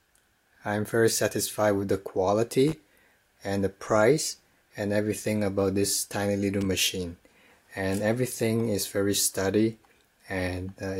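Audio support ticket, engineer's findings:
Loose connector crackle at 2.68–2.75 s and 6.61–6.66 s: short irregular scratchy bursts from a worn or dirty contact making and breaking. Ragged, uneven chopping rather than a single clean click or a regular dropout pattern, which points to a cable or jack over digital glitching.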